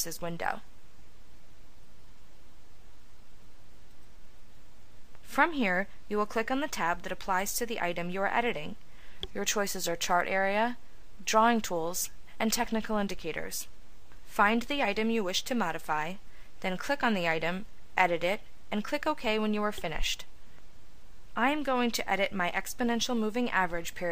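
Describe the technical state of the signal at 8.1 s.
At 8.1 s the signal is intact, with no audible fault at that moment.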